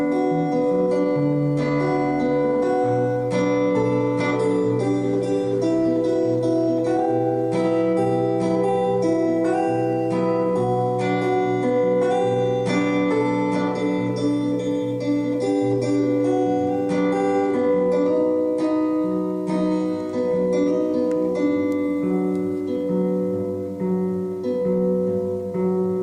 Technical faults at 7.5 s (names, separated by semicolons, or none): none